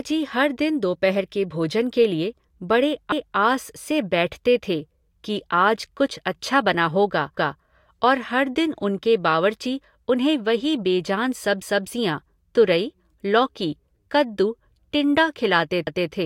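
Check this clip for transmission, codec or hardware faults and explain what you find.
There's one fault here, overlapping chunks, showing up at 3.12–3.37 s, 7.37–7.62 s and 15.87–16.12 s. The speech seems handled in 4-second blocks, each starting 250 ms before the previous one finished, so that quarter-second replays at the join as a click or stutter.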